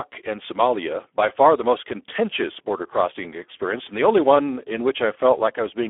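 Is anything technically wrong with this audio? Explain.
Yes, heavy Speex codec damage throughout: the CELP coder starves the excitation, which fits roughly 8 kbps, so speech turns noisy and hoarse, confined to 300 Hz–3.5 kHz, nothing above 3.8 kHz.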